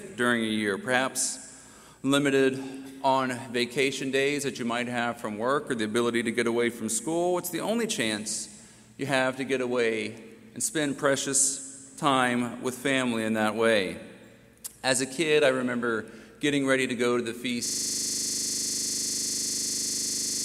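From 17.66 s to the end of the clip, a system hang loop takes over. The host or driver has stopped supplying new audio, so the output hardware keeps replaying the same 40 ms stretch of its ring buffer, about 70 times over. Repeating at 25 Hz, it sounds like a rigid, rapid stutter-buzz. Unlike a dropout or a glitch, the sound doesn't fall silent or break up. The identical fragment repeats exactly, with no variation, and never recovers.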